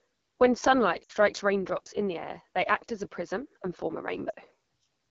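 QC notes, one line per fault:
Throughout: AMR wideband (HD Voice) codec, low rate that fits 8.85 kbit/s; the speech sounds rough and raspy, with noise-filled top band above 6.4 kHz.
1.04 to 1.12 s: lost AMR speech frames, about 60 ms; decoder repeats last pitch and vocal tract settings at falling gain, so sound fades to near silence, returns rough.
4.30 to 4.34 s: lost AMR speech frames, about 40 ms; shorter concealment drops to near silence before the speech recovers.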